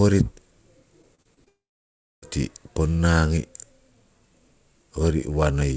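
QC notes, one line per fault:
1.02–1.48 s, repeated packet loss (robotic sound): the audio breaks up into five short holes, none longer than about 30 ms, with roughly a quarter of this half-second rebuilt rather than received. Each gap is papered over by stretching the preceding sound, then the next gap arrives before the stream settles. That stop-start patching gives the choppy, robotic texture, with small pieces of the signal missing, heard against the 8 kHz ceiling of the G.722 call path.
1.48–2.24 s, long network dropout: straight after the choppy stretch, the audio stops arriving for about three quarters of a second, most likely because the network connection stalled. The receiver briefly carries the last sound forward as a fading buzz or hiss, then gives up, leaving about 650 ms of silence. When the stream resumes around 2.24 s it picks up from the present moment, so the material from the gap is simply gone rather than delayed.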